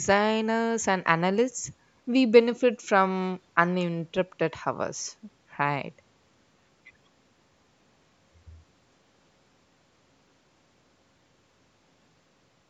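Speech captured through a call's microphone processing, with content stopping at 8 kHz and the lowest bass removed by its high-pass filter as designed, shows no technical faults.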